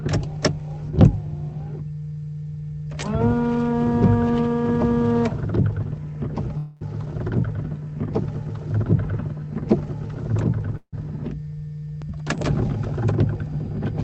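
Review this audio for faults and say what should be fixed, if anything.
Call audio freezes at 6.57–6.83 s and 10.77–10.95 s stretch the last sound into a fading buzz, likely from late packets draining the jitter buffer. On a spectrogram this shows as smeared horizontal bands, and the second event ends in about 70 ms of flat silence in the waveform. A deeper adaptive jitter buffer or a steadier network route would prevent these stalls.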